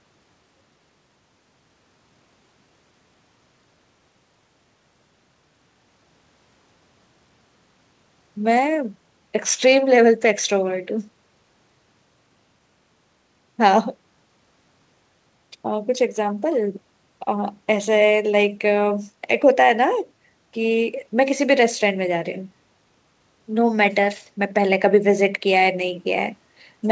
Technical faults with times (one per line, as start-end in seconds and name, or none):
none